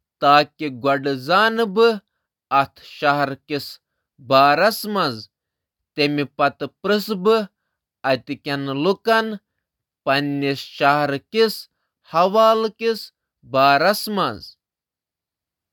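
Listening closely to the speech, nothing stood out as a technical fault at any point.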